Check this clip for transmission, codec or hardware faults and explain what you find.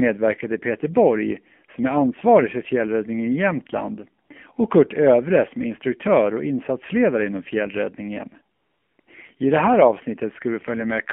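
Two faults are present, both from a mobile phone link. The speech runs through an AMR narrowband mobile codec throughout, and AMR comfort noise replaces the sound in three short gaps.

The AMR-NB codec damage is plainly audible across the whole clip. The line passes only about 200 Hz to 3.4 kHz, so the speech sounds thin and boxed-in. The codec rebuilds the voice from a vocal-tract model excited by sparse pulses. The buzzy, synthetic texture fits a low rate of about 7.4 kbps.

AMR comfort noise appears at 4.26 to 4.30 s, 8.56 to 8.98 s, and 9.00 to 9.06 s. The longest gap follows "och insatsledare inom fjällräddningen", and the later two lead into "I det här". The phone judged these moments silent and stopped sending speech. The receiver filled them with smooth synthetic noise, so the real background switches abruptly to a flat hiss and back.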